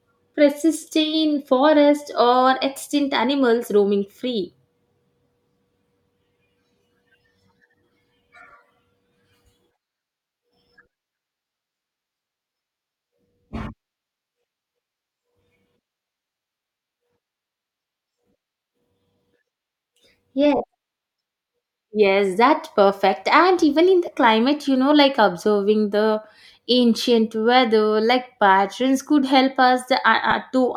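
Lost LE Audio frames break the speech at 20.57–20.60 s (30 ms, which fits three 10 ms frames), at 24.07 s between "even in the" and "climate you know like", and at 30.31 s. The LC3 decoder covers each gap by repeating the last spectrum with scrambled phase, so the speech turns briefly into a noisy smear instead of dropping to silence or clicking.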